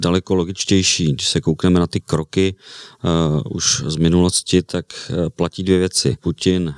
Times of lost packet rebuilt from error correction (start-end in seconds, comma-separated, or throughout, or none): none